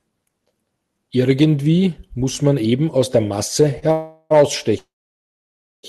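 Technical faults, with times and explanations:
3.79 to 3.84 s, short stall from a late packet: a brief hold of about 26 ms, where the last sound lingers with a faint buzz or dip. One packet arrived late, the jitter buffer ran dry, and the receiver stretched the previous audio until it came, then resumed with nothing lost.
3.92 to 4.32 s, call audio freeze: the sound smears into a buzz or hiss lasting about 0.38 s that fades to a brief silence near the end. Likely a run of delayed packets emptied the jitter buffer, so the receiver kept extending the last sound, then continued from the same point.
4.78 to 5.85 s, call audio freeze: a short fading tail of buzz or hiss, then nearly a second of silence, about 1.05 s in all. Likely the packets were held up long enough that the concealment faded out completely; playback then picks up where it stopped, inserting a gap rather than dropping anything.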